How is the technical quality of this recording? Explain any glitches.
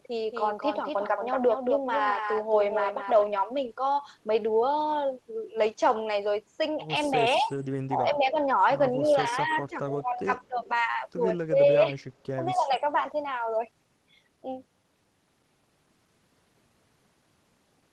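The recording has two echo-canceller problems in the middle of the clip, between about 7.4 and 12.8 s, heard on top of the coding texture and the upper limit of about 12 kHz that the call codec leaves on the speech.

Speech suppressed in double talk occurs at 7.39–7.52 s, 7.87–8.38 s, 9.01–10.62 s, 11.47–11.99 s and 12.45–12.82 s. When both ends were likely talking at once, the echo canceller couldn't tell this talker from loudspeaker echo and turned the speech down. It dips by roughly 10 to 20 dB, thinning or breaking up, deepest in the 9.0–10.6 s stretch.

Echo leak appears at 9.30–9.36 s and 10.60–10.68 s. The far end's canceller likely failed to remove everything its microphone picked up from its loudspeaker, so the speech returns about 0.2 s late. These are brief, faint scraps of delayed copy, about 30 dB below the direct speech.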